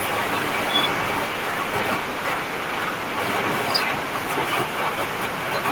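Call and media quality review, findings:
No faults found in this recording.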